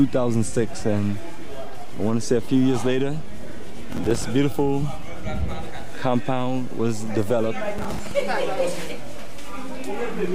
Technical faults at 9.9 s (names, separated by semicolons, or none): DC offset